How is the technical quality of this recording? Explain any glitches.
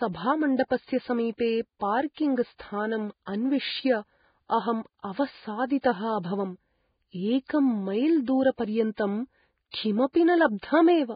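The technical quality is poor. Heavy codec damage runs through the whole speech clip.

From start to finish there is Vorbis compression, likely from a low-quality encode. Nothing is heard above about 4.9 kHz. The treble below that is quantised so coarsely that its detail turns into noise of similar energy. The result is hissy and grainy. Tones sound roughened and attacks are blurred. The damage fits a bitrate around 15 kbps.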